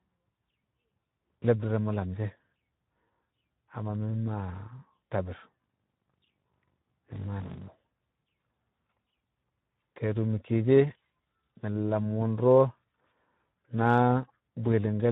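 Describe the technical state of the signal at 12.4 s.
At 12.4 s the speech carries Speex codec damage, present throughout: a starved CELP excitation, consistent with roughly 11 kbps, leaves it hoarse and noisy, with nothing above 3.8 kHz.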